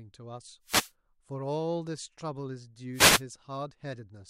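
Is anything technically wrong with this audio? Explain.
Yes: wireless microphone noise hits at 0.64–0.92 s and 2.93–3.22 s. The FM radio link fades as reflected signals cancel, letting receiver noise swell over the speech as a brief swish of static, seen as broadband noise bands on a spectrogram and fuzzy waveform bursts.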